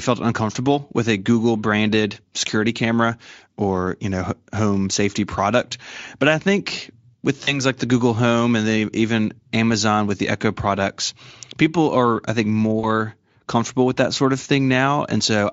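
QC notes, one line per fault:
7.43–7.62 s and 12.79–12.86 s, VoIP packet loss concealed by the speech codec: after "I think with" and "people are I think", 40 ms goes missing, fitting two lost frames; the decoder extends its last pitch and filter into a fading buzzy tone or coloured noise, and speech stays weak briefly afterward.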